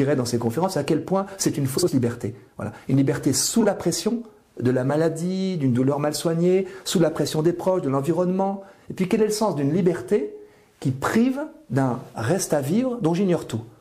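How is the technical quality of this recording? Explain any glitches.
Two brief frames out of order glitches mar the recording. From 1.77 to 1.89 s, and again from 3.60 to 3.66 s, adjacent blocks of about 52 ms and 26 ms play swapped, fitting runs of two frames and one frame exchanged. Each yields a garbled flutter, and no time is lost.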